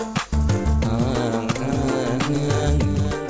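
At 1.52 to 1.54 s the audio skips ahead. About 0.7 s of sound is simply gone. That stretch was dropped while later audio was already waiting. The two sides join almost directly, with no filled gap, so it sounds like an abrupt jump.

From 2.16 to 3.01 s comes a jitter buffer speed-up. The buffer held too much audio, so short pitch-period pieces were cut out repeatedly, about a tenth of a second in total. Playback runs at about 111% speed with unchanged pitch. It sounds hurried. Through all of this, nothing is heard above 8 kHz, which fits a G.722 call codec at 64 kbps.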